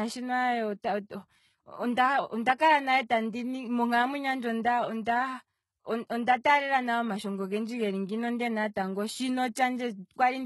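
Throughout the speech the treble sounds rebuilt rather than real. Nothing is present above 11.8 kHz. The upper band is coarse, and s sounds come out gritty and lispy. The likely cause is heavy HE-AAC compression, at a level of damage that fits a very low rate around 16 kbps. The codec keeps only the lower spectrum. It then copies those bands upward to fake the top, so the harmonics there don't line up.

At 2.58 s a brief pre-echo appears, a smear of hiss spread over about 17 ms just before "kala nale tandi". The codec spreads its noise across a whole block. A sharp onset late in that block lets noise sized for the loud part leak into the quiet gap ahead of it. The attack sounds softened. A second pre-echo comes at 9.55 s, shorter, about 10 ms of hiss ahead of the onset.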